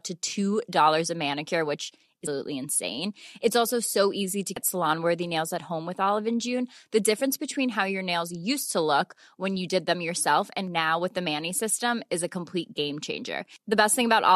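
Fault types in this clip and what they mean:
Damaged data in a compressed stream: Some bytes in the encoded speech are corrupted. The decoder misreads those frames, loses sync and hunts for the next valid header. Each hit is brief, at 2.25 s, 4.55 to 4.57 s, and 7.18 to 7.21 s.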